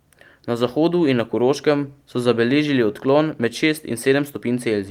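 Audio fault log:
Nothing stood out on listening to this speech recording.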